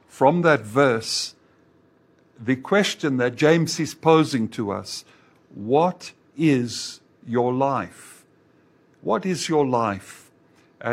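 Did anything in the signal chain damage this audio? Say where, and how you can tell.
No, nothing in the signal chain damaged this audio.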